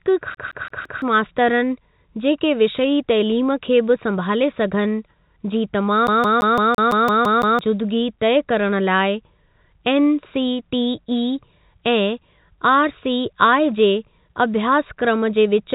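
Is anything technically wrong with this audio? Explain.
Yes. This speech clip has two kinds of technical fault. It passed through a G.711 mu-law call path, which removes everything above 4 kHz, but that band limit is not itself a fault.

CD stuck on one turn: From 0.35 to 1.02 s, just before "मास्तरनि जेके विषयी तइलीम", the same 0.17 s slice plays four times. From 6.07 to 7.59 s, right after "बि संभाले सघनि जी", it repeats nine times. The laser jumps back one track on every rotation, so identical audio returns with a tiny mute at each jump, giving a fast, even stutter. Unlike packet loss, nothing is smeared or synthesised. It is an exact replay.

Repeated packet loss (robotic sound): At 15.74 s, after "अभ्यासक्रम जे विच", the clip's final moment breaks up. Lost packets were concealed by stretching the preceding sound across the gap, which leaves a brief choppy texture with material missing. 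What separates it from the CD skip is that no identical chunk loops back in a steady rhythm. Instead the sound is patched over and degraded.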